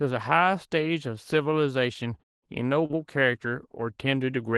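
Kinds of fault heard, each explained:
Short concealed packet loss: a brief smear in the speech at 2.85 to 2.91 s, where about 40 ms of lost audio was filled by extending the preceding sound.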